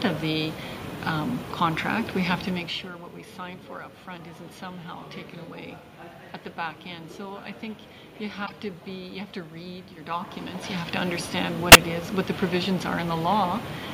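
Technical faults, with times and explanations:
6.48 s, 8.46–8.51 s and 11.72–11.75 s, corrupt frame decoded: short bursts of misplaced energy appear where bit errors reached compressed frames and the decoder played them anyway. Damaged gains and misread spectral codes put sound at wrong frequencies for a few frames each time, so each event is a brief chirp or noise blip. The bursts grow in strength, from faint near -40 dBFS to about -20 dBFS, then reaching an error peak of roughly 0 dBFS at 11.72 s.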